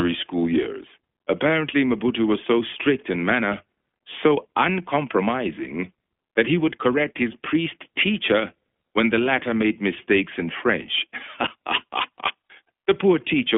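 A speech recording runs through the iLBC codec from start to finish. The sound is confined to a narrow phone band of about 250 Hz to 3.4 kHz, with nothing above 3.6 kHz. Each frame is coded on its own, giving plainly audible roughness. This fits the 20 ms, 15.2 kbps mode.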